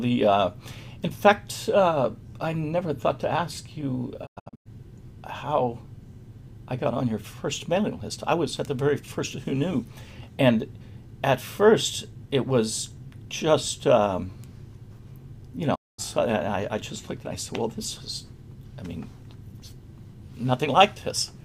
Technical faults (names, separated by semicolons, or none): digital broadcast dropout